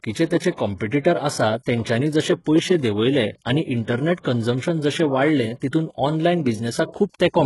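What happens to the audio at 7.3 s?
Gritty, metallic treble with lispy s sounds and nothing above 11.5 kHz, as throughout the clip; likely HE-AAC compression rebuilding the highs by band replication, consistent with a very low bitrate around 12 kbps.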